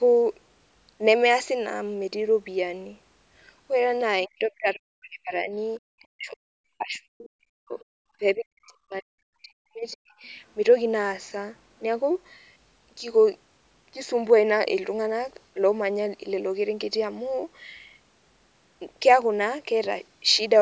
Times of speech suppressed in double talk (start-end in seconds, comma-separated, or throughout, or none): 4.26-5.54, 6.11-6.47, 6.78-7.78, 8.19-10.26